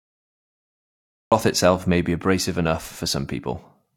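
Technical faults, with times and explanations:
0.00–1.32 s, cut-off start: recording began late, so digital silence gives way at 1.32 s to speech already mid-sound before "itself may be abrasive", with no natural attack. The waveform jumps from a flat line straight into the speech, and the spectrogram shows a hard vertical edge.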